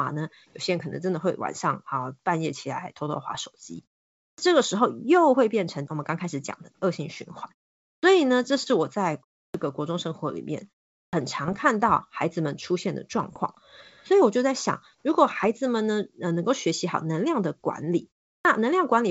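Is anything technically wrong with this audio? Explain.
Yes, there are four separate problems in this speech clip.

From 0.3 s to 18.25 s the background gets gated by the echo canceller. Whenever the far end's loudspeaker was active, the canceller clamped the microphone down hard, by as much as about 40 dB, so the room tone dips or vanishes and then comes back once it releases. It adds up to roughly four seconds of holes in the background, scattered through the clip.

There are bit errors on an ADPCM link at 3.35–3.47 s, 11.44–11.57 s, 13.24–13.40 s and 15.43–15.46 s. A few flipped bits knock the decoder's step size and predictor out of line, so each error smears on for a bit instead of staying a single click. You hear pops and short rough bursts with little jumps in level. The error rate is a small fraction of a percent.

Clipped starts after a pause land at 4.32, 7.97, 9.48, 11.07 and 18.39 s. 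Each follows a gap of about a third to half a second, long enough for the output device to drop into sleep. It then needs around 60 ms to wake up, and that opening slice of sound is lost. The speech jumps in abruptly out of silence with its first sounds missing.

Then there's echo leak from 6.43 s to 8.66 s and again briefly at 13.92–14.05 s. A faint delayed copy of the voice trails the original by 189 ms. It sits around 30 dB down in the longer stretch and about 35 dB down in the short one. It's likely a speakerphone on one end whose echo canceller didn't fully scrub what its mic picked up, so some of it got sent back.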